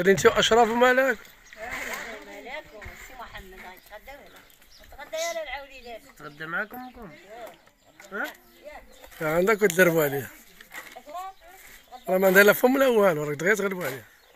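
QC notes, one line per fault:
0.00–3.37 s: channel delay (comb filtering). One channel lags by about 0.05 ms. Summed to mono, highs cancel around 10 kHz, so the sound turns dull.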